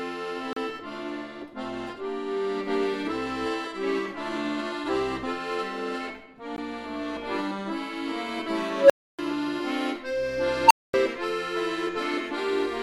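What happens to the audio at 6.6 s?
At 6.56 s there is a gap at a join of encoded pieces: a 16 ms gap, left by untrimmed encoder delay and padding, with smeared edges before the sound resumes.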